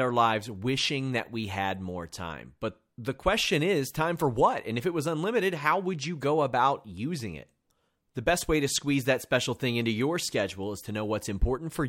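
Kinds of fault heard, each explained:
No audible technical faults were found in this speech recording.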